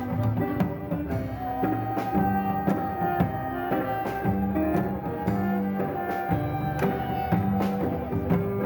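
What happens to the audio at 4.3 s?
At 4.3 s the audio carries imaging from sample-and-hold upsampling, which runs through the whole clip. The sound was raised from 16 kHz to 48 kHz by simply repeating each sample, with no smoothing filter, so a mirrored copy of the spectrum fills the 8 to 16 kHz band at about 25 dB below the signal. It is a bright metallic fizz riding on the sound. Unlike distortion harmonics, which rise with pitch, this copy moves downward as pitch rises.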